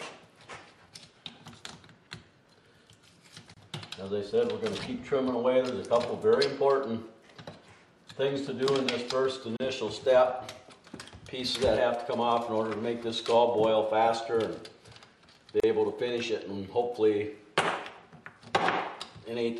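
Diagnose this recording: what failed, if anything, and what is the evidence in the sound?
The failure is at the codec stage: a gap at a join of encoded pieces. The sound drops to silence three times, at 3.54 to 3.57 s, 9.57 to 9.60 s and 15.60 to 15.64 s. The gaps last 28, 34 and 34 ms and recur every 6 s. Each piece was encoded on its own and then butted together untrimmed. The encoder's start-up delay and end padding stay in as silence. The edges are smeared, and the sound resumes where it stopped.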